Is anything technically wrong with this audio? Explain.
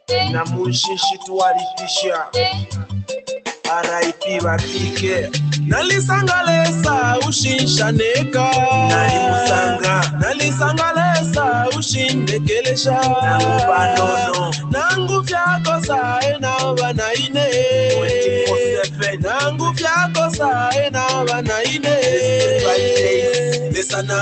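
Yes, there are two spots where the sound gets cut by the noise suppressor, at 3.4 to 3.65 s (dipping about 10 dB) and 18.88 to 19.21 s (about 7 dB). It mistook the sound for noise and pulled it down, so each stretch briefly sinks.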